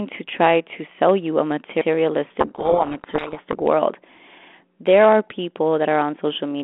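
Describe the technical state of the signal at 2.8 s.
At 2.8 s the speech is buried in harsh, grinding distortion from 2.4 to 3.55 s. This is a codec payload misread: the decoder takes the G.726 code words in reversed bit order, so each sample's difference value is rebuilt wrongly.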